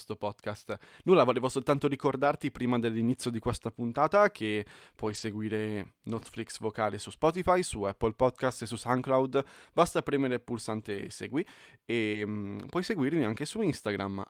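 The speech turns briefly rough and noisy at 2.19–2.25 s, 5.05–5.19 s, 6.15–6.41 s, 7.31–7.37 s, 8.49–8.51 s and 10.89–11.07 s, with no silence. These are lost packets rebuilt from error correction: the following packet carried a coarse low-bitrate copy that the decoder played instead, filling 20 to 140 ms each time. At 12.11–12.15 s a short smear or wobble marks short concealed packet loss. About 20 ms arrived too late, and the receiver extended the preceding sound to fill the hole before blending back. A rougher error-correction copy also overlaps this spot at 12.13 s.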